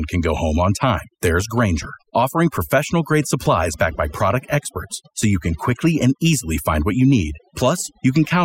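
Overdone noise removal runs through the whole speech clip. A noise reducer set too strong pulls individual frequency bands down whenever they sit near its noise estimate. Quiet parts of the voice vanish too. Gaps fall to near silence with twinkling specks.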